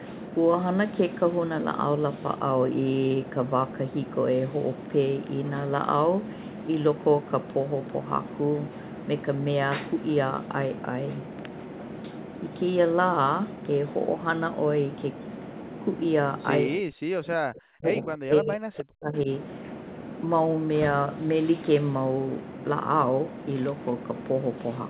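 Speech suppressed in double talk, from 16.79 to 17.85 s and again from 18.01 to 19.28 s: the speech sinks by as much as around 40 dB, likely because an echo canceller could not separate the talker from overlapping far-end loudspeaker echo and turned both down, leaving muffled, broken fragments.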